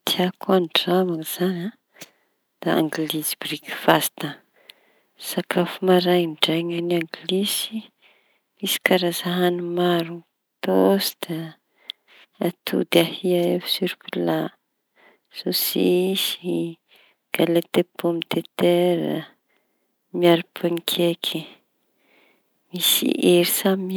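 No technical faults are audible anywhere in this speech.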